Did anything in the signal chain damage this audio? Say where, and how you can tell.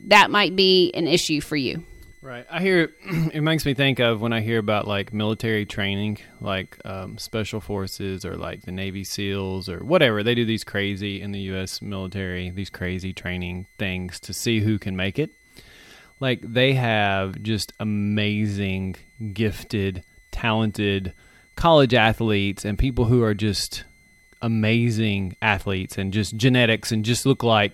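Yes. The damage happens in the analogue stage, where a switching power supply feeding the chain is running in an audible burst mode or beating with another supply and is leaking onto the audio. The result is a switching supply whistle: a thin, high tone around 2 kHz, present for the whole length of the speech. It sits well below the speech, roughly 35 dB down, and its pitch wanders between about 2.0 and 2.1 kHz as the supply's load shifts.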